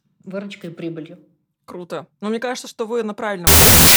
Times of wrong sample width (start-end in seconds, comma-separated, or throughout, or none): 3.47-3.96